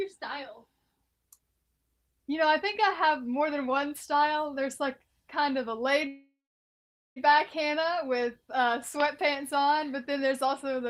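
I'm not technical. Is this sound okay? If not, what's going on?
No. From 6.07 to 7.18 s the sound stalls into a fading buzz, then about 0.77 s of silence. This call audio freeze likely comes from delayed network data; nothing is lost, and playback resumes about 1.1 s late.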